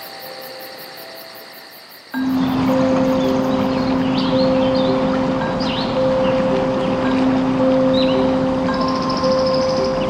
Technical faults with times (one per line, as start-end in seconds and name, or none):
none